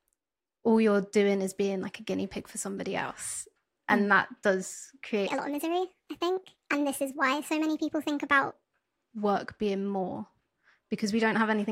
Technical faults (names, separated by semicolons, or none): section at the wrong speed